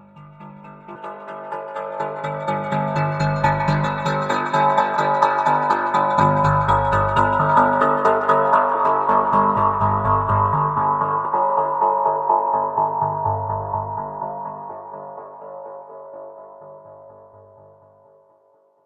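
The audio lurches forward at 0.94, 3.83, 4.96, 6.19, 7.39, 8.73 and 11.24 s. These are compressed frames skipped: whole frames were missing or rejected as damaged, dropping somewhere between a few tens of milliseconds and nearly half a second each time.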